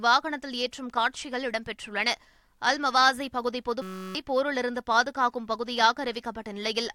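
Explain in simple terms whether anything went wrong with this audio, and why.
At 3.82 seconds the speech stops and a steady buzz takes over until 4.15 seconds. This is a system hang loop. The computer froze for a moment, but the sound hardware kept replaying the last tiny slice of audio it held. That slice lasts only 5.33 ms, which fits a 256-sample buffer. It repeats 62 times, about 188 times per second, so it blurs into a buzz. Roughly a third of a second of real speech is lost.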